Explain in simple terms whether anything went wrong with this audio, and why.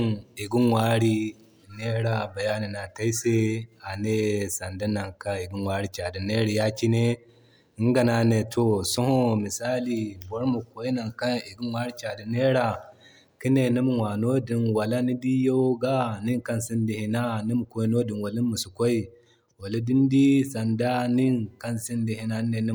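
Nothing went wrong with this speech recording: the signal runs steadily the whole way with no interruptions, gaps or damage to be heard at any point.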